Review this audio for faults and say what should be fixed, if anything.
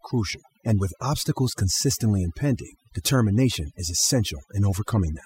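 Overdone noise removal runs through the whole clip. The noise reduction was pushed too hard, so any frequency band sitting close to what the tool took for noise gets pulled way down or cut out entirely. That drags the softer parts of the speech away with the noise, which is why the background in the gaps drops and breaks up into little twinkly specks. To avoid it, back off the reduction amount and set the noise profile carefully, trading a bit of leftover noise for a natural-sounding voice.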